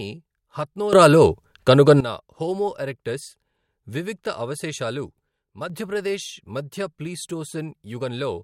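At 0.93 s the level jumps up by about 15 dB, with the background rising too. It holds until 2.0 s, just before "హోమో ఎరెక్టస్". From 5.29 to 5.70 s, after "వివిక్త అవశేషాలు", it drops by about 6 dB. Both are sudden gain jumps, likely from gain changes applied without a ramp.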